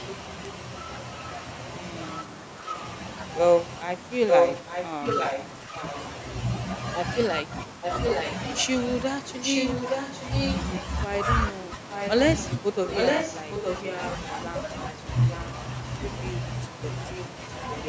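From 4.29 to 5.95 s, 7.82 to 8.34 s, 9.46 to 10.62 s and 11.92 to 15.45 s, a copy of the speech trails 864 ms behind, about 5 dB louder than the original in the first span, roughly as loud in the second and fourth, and about 5 dB quieter in the third. This is echo leak, likely from a loudspeaker echo canceller passing its microphone pickup back.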